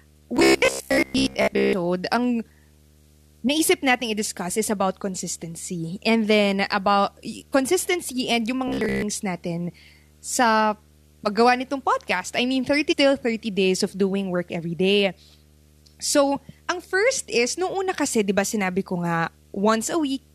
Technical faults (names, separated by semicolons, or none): video or display buzz; robotic sound from repeated short buffers; damaged data in a compressed stream